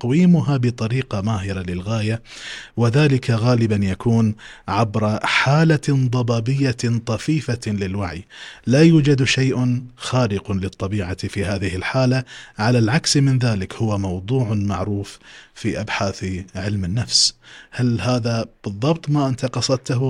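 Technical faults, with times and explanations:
Throughout: resampler restarted on every block. Each 100 ms block was converted from 48 kHz to 44.1 kHz on its own, leaving a small error at every edge, heard as 10 Hz ticking under the speech. A spectrogram shows faint vertical lines every 100 ms, and the waveform shows small steps at block boundaries.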